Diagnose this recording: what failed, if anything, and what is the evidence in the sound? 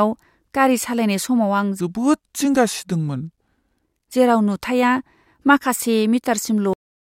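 A section at the wrong speed points to the editing or playback stage, which likely ran this stretch against the wrong clock. From 1.80 to 3.84 s the speech plays at 0.806 times its recorded speed, so pitch falls about four semitones and delivery turns slow and deep.

A cut-off end points to the storage or playback stage, where the final buffers were never written out. At 6.73 s the speech stops in the middle of a sound and drops straight to digital silence with no natural decay, staying silent to the end.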